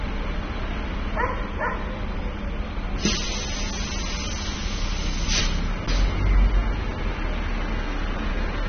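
From start to finish the sound is dull and smeared, with a warbling, fizzy texture on sustained parts, most likely AAC compression at a low bitrate near 24 kbps. On a spectrogram nothing appears above 6.3 kHz.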